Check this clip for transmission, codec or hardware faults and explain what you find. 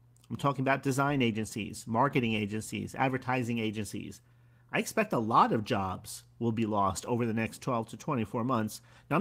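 One transmission fault is audible: a lost packet rebuilt from error correction, from 7.05 to 7.07 s, between "jobs will be lost" and "over the next". About 20 ms of sound, which fits a single lost packet, was replaced by the low-bitrate backup copy carried in the following packet. There is no dropout, but that short stretch sounds rougher and noisier. A waveform shows no gap, and a spectrogram shows a brief smeared, noisier slice.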